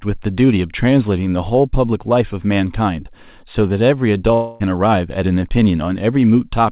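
At 4.34 s the sound turns into a smeared, buzzy continuation of its last moment. It fades for about a quarter of a second and never drops to silence, and at 4.62 s the speech resumes with roughly 0.26 s missing. This is a long network dropout, likely a burst of lost packets that the receiver filled in. A brief packet-loss glitch would be a single short blip. Here the fill runs long enough to be heard decaying inside the call's band, which stops at 4 kHz.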